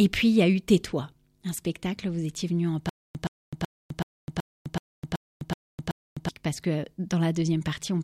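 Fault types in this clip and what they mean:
Stutter with silent gaps: from 2.89 to 6.29 s a 121 ms speech fragment repeats nine times, each followed by 256 ms of dead silence, likely a stalling stream.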